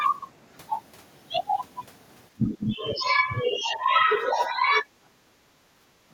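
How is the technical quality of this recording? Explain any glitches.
The recording has two echo-canceller faults, both after the first two seconds of the clip.

From 2.33 to 4.85 s the speech dips by up to about 15 dB. This is likely speech suppressed in double talk, where the canceller mistakes the talker for echo. It differs from gating because the voice itself is turned down.

From 5.13 to 6.09 s the background is gated by the echo canceller, dropping about 11 dB while the loudspeaker plays.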